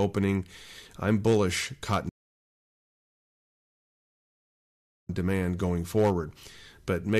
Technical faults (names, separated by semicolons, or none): rebuffering stall